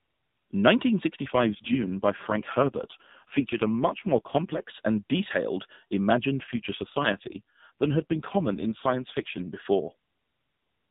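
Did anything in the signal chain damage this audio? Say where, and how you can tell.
Yes, at the codec stage: an AMR rate drop, twice, from 1.26 to 4.73 s and from 6.40 to 9.63 s. The speech turns rougher and buzzier with no gap and the same 4 kHz band edge, which fits a fall from 12.2 to 4.75 kbps. On a spectrogram, harmonics blur while the band edge holds steady.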